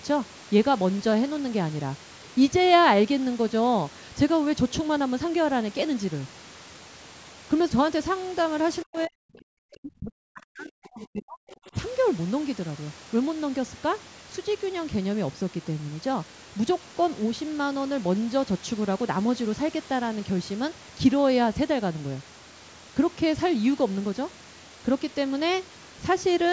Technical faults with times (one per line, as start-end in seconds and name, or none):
8.83-11.75 speech suppressed in double talk
8.96-9.00 other side's voice leaking through
11.50-11.70 other side's voice leaking through